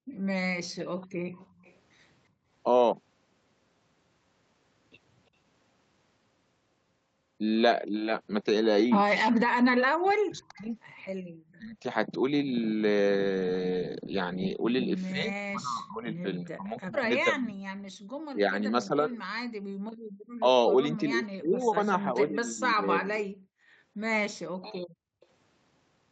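Speech, carried over a call with nothing above 8 kHz. The room sound behind the talker dips or vanishes briefly at 0.00–2.48 s, 11.21–11.31 s, 19.51–20.12 s and 23.59–25.21 s, falling by up to about 34 dB. This is background gated by the echo canceller, which clamped the microphone hard while the loudspeaker played. A faint delayed copy of the audio, about 30 to 35 dB below the speech and trailing it by 341 ms, surfaces at 0.12–1.75 s, 10.39–10.66 s and 25.21–25.26 s. That is an echo leak, likely residual loudspeaker sound the canceller failed to remove. From 9.31 to 11.84 s and from 15.12 to 23.31 s, the talker's voice sinks or cuts out in pieces, by up to about 40 dB, for roughly a second and then roughly four seconds in total. This is speech suppressed in double talk: both sides likely spoke at once, and the canceller turned everything down.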